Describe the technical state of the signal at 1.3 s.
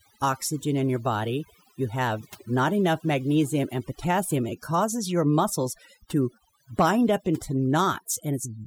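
At 1.3 s the speech is under overdone noise removal, which runs through the whole clip. A noise reduction stage set too aggressively is switching individual frequency bands down or off wherever their level sits near its noise estimate, and the quieter components of the voice are being cut along with the noise. Between phrases the background drops and breaks up into twinkling specks.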